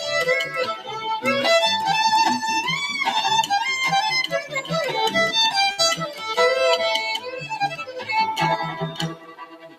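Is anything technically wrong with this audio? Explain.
Yes, there are three problems.

A noise suppressor applied to music or sounds runs through the whole clip. A processor built for speech treats sustained tones, ambience and decay as noise and keeps pulling them down, so the level swings by around 10 dB. Onsets get through while anything held sinks behind them. The result is a pumping, fluttering texture that thins out whenever the sound settles rather than strikes.

Sound cut by the noise suppressor is heard at 0.46 to 1.05 s, 4.43 to 4.71 s, 6.09 to 6.24 s, 7.18 to 7.55 s, 7.72 to 8.09 s, and from 8.72 s to the end. In these stretches the suppressor judged the material to be noise and attenuated it harder than elsewhere. The drops reach about 11, 10, 9, 9, 10 and 15 dB. Steady or fading parts duck or have their tails clipped, and the last one is the deepest.

A short stall from a late packet occurs at 5.71 to 5.81 s. 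A packet arrived late, the jitter buffer emptied, and the receiver held the last sound for 68 ms until the data came in. Playback then resumed from the same point, so nothing is lost. The sound freezes briefly with a faint buzz or dip, and everything after it is shifted 68 ms later.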